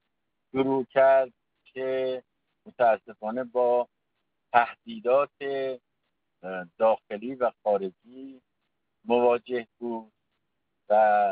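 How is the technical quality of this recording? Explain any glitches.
There are no glitches in this recording; its technical quality holds steady throughout.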